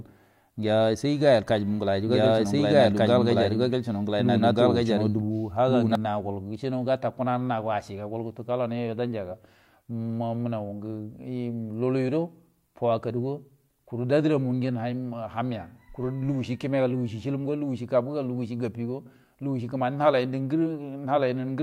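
From 1.49 s to 5.95 s the speech carries a doubled audio track: a second, full-band copy of the same speech runs about a second and a half behind the first, at roughly the same level. The copy has no reverberant tail or room colouring, and it cuts in and out abruptly at those boundaries. The likely cause is the signal being picked up a second time through a slower path, or an edit leaving two misaligned copies stacked.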